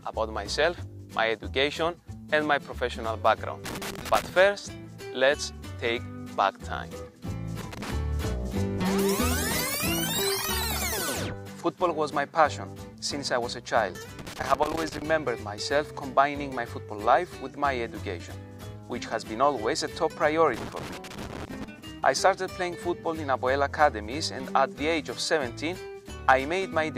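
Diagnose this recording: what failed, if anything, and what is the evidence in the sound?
Irregular bursts of crackle and scratching cut into the audio at 3.66–4.29 s, 7.61–7.91 s, 14.19–15.02 s and 20.54–21.64 s. This is loose connector crackle in the analogue wiring: a worn or dirty contact repeatedly making and breaking, chopping the signal into rough fragments.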